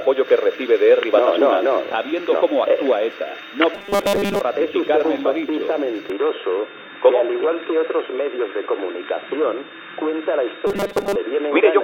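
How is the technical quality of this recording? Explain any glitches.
The recording has clear technical faults: two bursts of robotic buzzing and a mid-clip drop in bandwidth.

From 3.74 to 4.41 s and again from 10.67 to 11.15 s, the sound becomes a rigid, metallic buzz at 200 Hz. This robotic sound from repeated short buffers is likely caused by late audio being covered by looping the last 5 ms chunk, replacing most of the real signal.

At 6.10 s, with no gap and no noticeable level change, the sound turns dull and boxy through to the end. A new noise floor sits roughly 30 dB below the signal. This points to the input switched to a poorer device, likely a narrowband microphone or a headset call profile.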